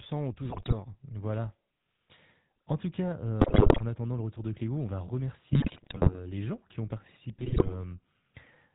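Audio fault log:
Throughout: GSM full-rate codec. The speech has the buzzy, gravelly roughness of the first GSM coder, and the damage is plainly audible. Nothing above 4 kHz survives, so the sound is dull and boxy. The coder rebuilds the voice from a vocal-tract model driven by regularly spaced pulses, keeping only a thinned-out version of the excitation. That coarse pulse train is what gives the grating texture, which fits the 13 kbps full-rate mode.
0.50–0.73 s, 3.40–3.82 s, 5.50–6.18 s, 7.38–7.75 s: GSM bit errors. In each of these four stretches the speech breaks into squawks, pops and gargling, lasting from about 0.2 s to about 0.7 s. Corrupted bits reach the decoder and garble the filter, pitch and gain values for successive frames. The spectrum lurches and the level jumps frame by frame, which sounds like a weak radio link failing briefly. The burst at 3.40 s is the most heavily corrupted.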